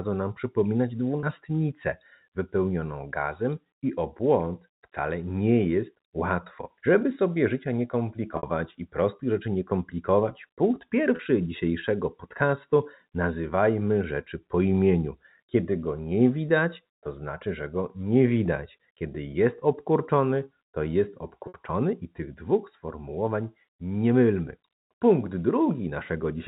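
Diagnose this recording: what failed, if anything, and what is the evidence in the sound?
Buzzy held sustains at 1.2, 8.37, 11.16 and 21.48 s: network packet loss with pitch repetition, the last pitch period repeated across 30 to 60 ms gaps.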